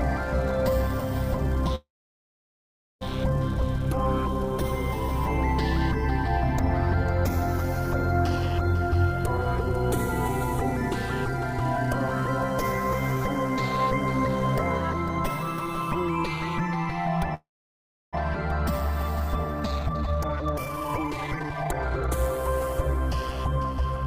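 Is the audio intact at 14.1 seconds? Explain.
Yes, at 14.1 seconds the audio plays through cleanly with no dropout, click, distortion or other fault.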